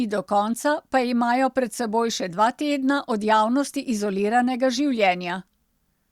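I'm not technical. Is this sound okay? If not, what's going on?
Yes, nothing stood out as a problem when listening to this recording.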